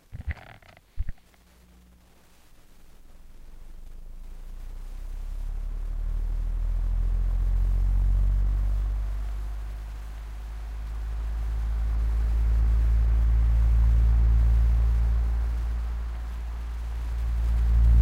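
A recording of everyday sounds with a regular click every 1.97 s from 1.19 to 16.92 s, about ten in all, likely clock drift buffer slips from two devices disagreeing by a couple of hundred ppm.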